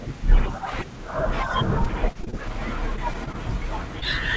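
From 1.84 to 2.54 s there is repeated packet loss, heard as a robotic sound. Six short gaps arrive close together, none longer than about 20 ms. Each is patched by stretching the previous sound, so roughly a sixth of the stretch is filled in. The speech turns choppy and robotic.

The same fault returns from 2.96 to 3.36 s. This time there are four gaps, the longest about 19 ms. Concealment covers about 15% of the span. The same broken, mechanical texture comes back.

From 4.00 to 4.04 s there is a short concealed packet loss. About 20 ms of audio never arrived. The receiver bridged it by extending the last sound, then blended back into the real signal. It comes through as a brief smear or wobble. The call codec's band limit holds throughout, with nothing above 8 kHz.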